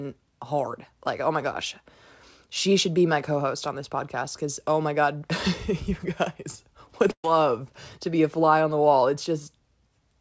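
Just after "you guys", a short concealed packet loss at 7.08 to 7.10 s replaces about 10 ms with continued sound, leaving a brief smear or wobble. A burst of packet loss follows from 7.11 to 7.25 s. About 130 ms never arrives, and the receiver extends the last sound before fading it, with roughly 70 ms going silent before the audio resumes further on.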